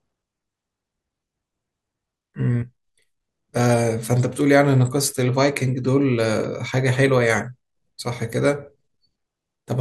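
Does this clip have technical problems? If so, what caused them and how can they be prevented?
Yes. Around 6.36 to 6.44 s, compressed frames were skipped: whole frames went missing or were rejected by the decoder, so playback jumps ahead by about a tenth of a second. Checksummed transfer and integrity checks before decoding prevent this.

At 7.38 s a corrupt FLAC frame with flipped bits was decoded without checking its checksum, so the predictor ran on wrong values and produced an error peaking at about -19 dBFS, confined to what sounds like a single frame. Enabling CRC verification, for example with flac -t, prevents this.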